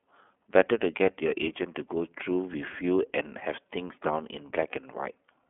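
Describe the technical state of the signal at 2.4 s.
At 2.4 s, as throughout the clip, the speech has passed through the iLBC codec, which models each block of the signal on its own, consistent with 30 ms frames at the 13.33 kbps mode. Bandwidth is held to a telephone line of roughly 200 Hz to 3.4 kHz, with nothing above 3.6 kHz. The speech sounds muffled and boxy, and the coding damage is plainly audible as a rough, slightly synthetic grain on the speech.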